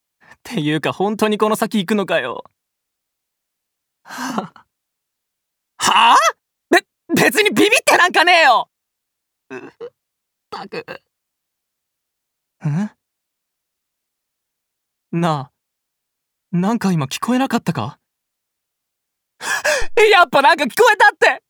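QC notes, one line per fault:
19.82–20.18 s, phantom power thump: a deep, low thud rises abruptly to a peak of about −11 dBFS and dies away in roughly 82 ms. The supply voltage switched on or off on the live input steps across the coupling capacitors, leaving a single smooth, pitchless transient. A handling bump or plosive pop differs: those come in irregular rumbles or breath bursts, while this thump has the clean exponential fall of one electrical step.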